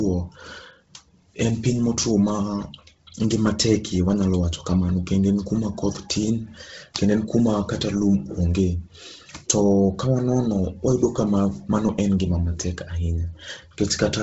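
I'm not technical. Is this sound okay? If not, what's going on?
No. The speech sounds compressed from start to finish. It is likely Bluetooth LC3 compression, the codec used by newer Bluetooth earbuds and headsets. The codec was squeezed hard here, so it threw away much of the fine detail in the upper part of the sound and filled the gaps with noise. That gives the voice a breathy, grainy edge. Nothing comes through above about 7.8 kHz, so the crisp top end is missing too.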